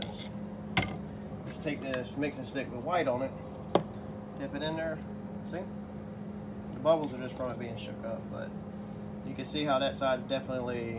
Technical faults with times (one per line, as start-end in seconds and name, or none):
none